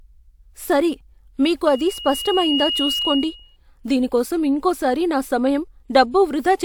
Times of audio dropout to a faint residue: none

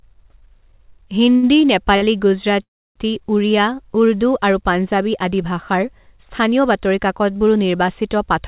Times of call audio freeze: 2.62-2.97

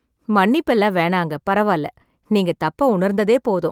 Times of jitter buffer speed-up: none

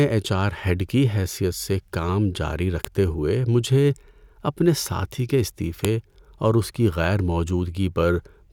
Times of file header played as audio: 2.85, 5.85

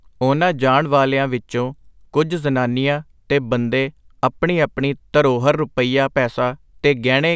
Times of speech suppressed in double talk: none

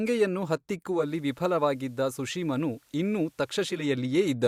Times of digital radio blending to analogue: 0.87-3.93

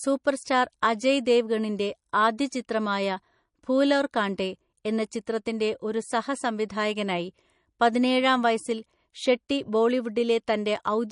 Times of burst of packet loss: none

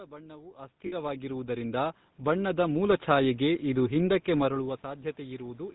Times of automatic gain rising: 0.55-3.36

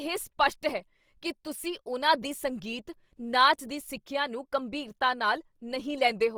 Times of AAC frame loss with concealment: none

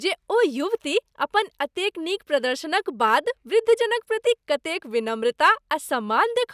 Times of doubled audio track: none

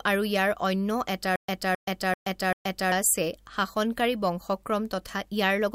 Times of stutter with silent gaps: 1.36-2.92

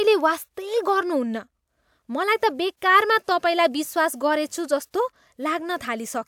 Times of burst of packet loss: none

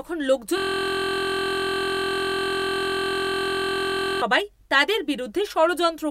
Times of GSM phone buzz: none

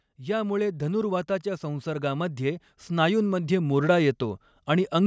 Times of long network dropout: none

